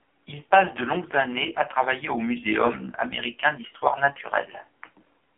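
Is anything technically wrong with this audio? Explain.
Yes, it's been through an AMR narrowband mobile codec from start to finish. Nothing above 3.5 kHz survives, and the speech sounds heavily buzzy and synthetic. That points to a low mode near 6 kbps, with too few bits for the codec's vocal-tract model to hide itself.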